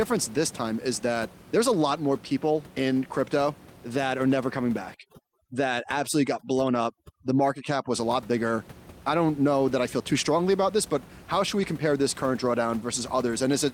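At 4.29 to 4.31 s there is a lost packet rebuilt from error correction. About 20 ms of speech turns briefly rough and noisy. Unlike a plain dropout or concealment, there is no gap and no smeared repeat, because the next packet carried a low-bitrate copy that was played instead.

From 4.94 to 7.94 s, overdone noise removal affects the speech. The room noise, about 21 dB below speech elsewhere, drops and breaks up into twinkling specks. Quieter parts of the speech are gated out band by band, which sets this apart from a simple broadband reduction.

The same error-correction rebuild returns at 10.21 to 10.23 s (about 20 ms) and at 11.59 to 11.65 s. The second one rebuilds about 40 ms, which points to two separate lost packets. Both are brief rough, noisy patches with no silence.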